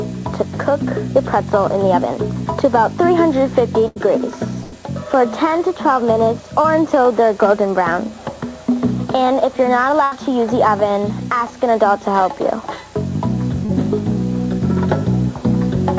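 Three times the sound briefly locks into a held, fading tone or hiss and then jumps forward with a piece missing: at 3.88–3.98 s, 4.64–4.74 s and 10.04–10.13 s. Each is a burst of packet loss. Roughly 80 ms of audio never arrived in time, and the receiver bridged each hole by stretching the last sound and turning it down before picking up the stream further along. Two shorter disturbances, a quick smear or wobble at 6.62–6.66 s and at 13.65–13.71 s, are short concealed packet loss. About 20 ms and 40 ms of audio went missing there, and the decoder patched each gap by extending the preceding sound and blending back into the real signal, which can swallow a brief sound outright. All of this passed through a call codec and jitter buffer. The band stops at 8 kHz, which fits G.722 wideband coding, likely at 64 kbps.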